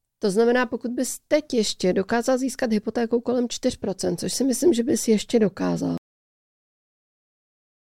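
Speech recording with a cut-off end: at 5.98 s the sound stops mid-utterance and drops straight to digital silence with no decay, unlike a fade-out or natural ending.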